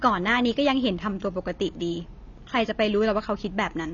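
Speech, with AAC compression damage throughout. Nothing sounds above 7 kHz, so the audio is dull. The damage is plainly audible: smeared detail and a warbling, fizzy texture on sustained sounds. The likely cause is low-bitrate AAC-LC, which fits about 24 kbps.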